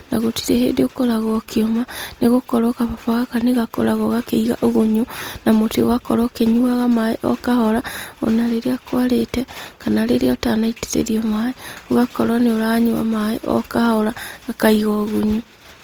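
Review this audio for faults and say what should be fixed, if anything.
Throughout the clip the speech sounds rough and grainy, its tones turned noisy rather than swirly, though content still reaches about 20.2 kHz. This is likely Opus compression in CELT music mode, filling starved bands with folded or noise energy, consistent with roughly 24 kbps. Encoding at a higher Opus bitrate, or working from the original recording, would prevent it.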